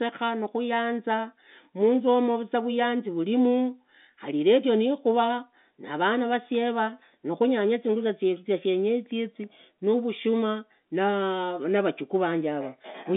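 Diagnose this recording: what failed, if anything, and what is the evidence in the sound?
Nothing failed; no faults found.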